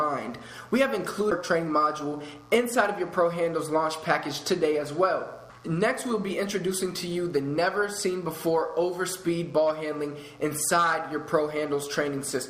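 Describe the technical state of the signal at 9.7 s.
At 9.7 s a mains buzz is present, as it is for the whole clip. Switching spikes arrive twice per 60 Hz cycle, adding harmonics up to several kHz. The result is a steady, raspy buzz, roughly 35 dB below the signal.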